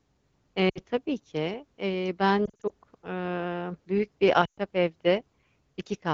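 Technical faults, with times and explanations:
0.69–0.79 s, 2.45–2.72 s, 4.45–4.58 s: lost AMR speech frames. Radio errors corrupted speech frames in the clear AMR wideband stream, so the decoder replayed the last good pitch and vocal tract settings at falling gain. The first fault is about 60 ms just before "tabii ki eee". The second is between "tabii ki eee" and "ııı büyük bir": about 140 ms of losses scattered over 240 ms, in short runs of up to 40 ms, giving repeated warbles. The third is about 120 ms right after "ııı büyük bir", where the sound drops to near silence before recovering roughly.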